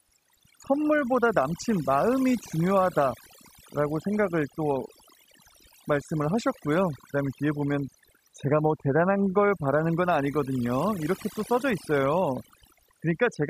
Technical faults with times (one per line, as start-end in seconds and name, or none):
0.00-13.49 overdone noise removal